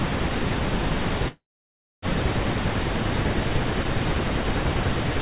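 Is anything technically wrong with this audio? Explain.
Yes, there's a call audio freeze in this speech from 1.28 to 2.05 s. Packets were likely held up in transit, so the jitter buffer ran dry and filled the gap with a fading tail, then about 620 ms of silence. Nothing's lost; the speech resumes where it stopped, running about 744 ms late. The narrow sound, with nothing above 4 kHz, fits a G.711 mu-law call path.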